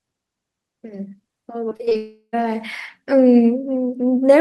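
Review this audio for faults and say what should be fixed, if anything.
Repeated packet loss (robotic sound) from 1.69 to 1.97 s: five short holes, the longest 24 ms, are patched by repeating the last sound. About a third of the stretch turns choppy. A larger jitter buffer and forward error correction would prevent it.

From 1.97 to 2.35 s the sound is stretched into a fading buzz, then about 70 ms of near-silence before it resumes with material missing. This is likely a long network dropout. Redundant transmission or a more stable network path would prevent it.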